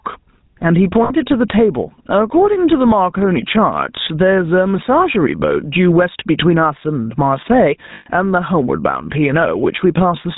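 Speech throughout has a buzzy, gravelly roughness with nothing above 4 kHz, typical of the GSM full-rate codec, whose damage here fits a 13 kbps rate. The gain swings by roughly 10 dB, pulling loud and soft parts closer in level and squashing the sound, most likely gain pumping from input gain set far too high with a fast limiter clamping it. From 1.04 to 1.26 s and again from 7.94 to 8.07 s, the sound freezes into a rough metallic ring. These are lost GSM frames, each patched by repeating the last good frame, about 60 ms missing in the first gap and 120 ms in the second.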